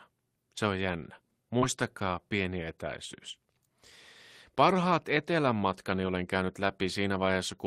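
A speech clip with two network faults. First, about 20 ms of audio failed to reach the decoder in time just after "on jännä", and the receiver concealed it by extending the preceding sound and then crossfading back, so roughly 24 ms from 1.59 to 1.64 s is a synthetic fill. It is audible as a brief smear or wobble. Second, at two points a packet went missing but was recovered from a low-bitrate duplicate carried in the next packet, which is Opus in-band forward error correction, a lost packet rebuilt from error correction. Each rebuilt stretch lasts 20 ms, which fits a single packet: the first overlaps the end of the concealment at 1.62 to 1.64 s, and the second runs from 4.70 to 4.72 s, just before "etelän matkani olen käynyt". Nothing drops out, but those frames come through rougher and noisier than the surrounding audio.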